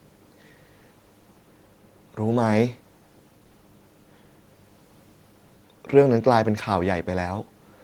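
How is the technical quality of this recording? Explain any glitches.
The technical quality of this recording is good, and there are no glitches to explain.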